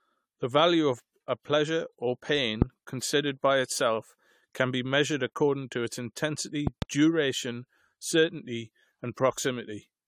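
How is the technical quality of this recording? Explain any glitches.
The quality is compromised by a persistent codec smear and by two pop events, at 2.62 s and 6.67 s.

Generation loss runs throughout: the speech sounds swirly, hollow and smeared, with blurred attacks and nothing above 19.3 kHz. This likely comes from roughly ten passes through a lossy codec, consistent with repeated AAC-LC at 96 kbit/s, each pass adding its own quantisation noise.

A loud pop appears from 2.62 to 2.64 s as one sharp click, about 20 dB above the speech. From 6.67 to 6.84 s a second loud pop event brings two pops, about 15 dB up. The speech continues underneath both. The likely cause is a sudden voltage pulse from a switch, plug, static or driver glitch.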